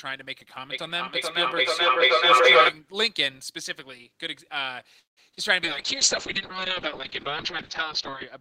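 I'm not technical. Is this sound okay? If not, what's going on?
No. Four separate problems can be heard.

From 0.72 to 2.84 seconds there is feedback echo between two devices. Two devices on the same call in one room are picking up each other's playback, so the speech loops back about every 0.4 seconds. The repeats build up until they are louder than the speech itself.

At 4.99 to 5.19 seconds there is a call audio freeze, most likely because parts of the call were held up on the way. The sound stalls, goes silent for a moment, then carries on exactly where it stopped, so nothing is lost.

At 5.35 to 5.39 seconds there is short concealed packet loss. A tiny piece of the call never arrived in time, and the receiver patched the gap with a guessed continuation. It comes through as a brief smear where a sliver of sound drops out.

From 5.64 seconds to the end there is a call bitrate drop. The connection had much less capacity, so the audio was squeezed hard. 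The speech turns rough and muffled, losing its crisp top end for the rest of the clip.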